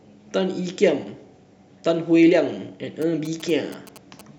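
A nearby 2G phone that is not in an active call sends short clusters of radio bursts, and from 3.02 to 4.21 s the audio circuit rectifies that energy into the speech path. The result is GSM signalling bursts: a galloping dit-dit-dit of brief buzzes pulsing at 217 Hz, sitting roughly 20 dB below the speech. It stops just before the end of the clip.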